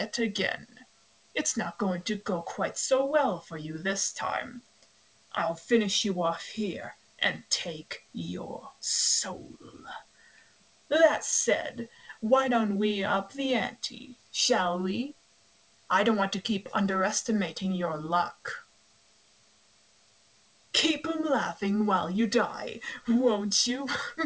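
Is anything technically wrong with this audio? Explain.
No, nothing is technically wrong: the sound comes through a normally working WebRTC call path, with the expected wideband band limit at 8 kHz that fits a G.722 codec.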